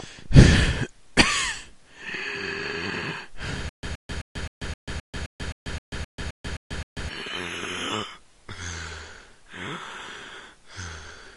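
From 3.69 to 7.09 s the playback likely stalled and kept retrying, producing a stutter with silent gaps. A 122 ms fragment repeats 13 times, each followed by 139 ms of digital silence in a steady 261 ms cycle, and the sound meant for that span is lost.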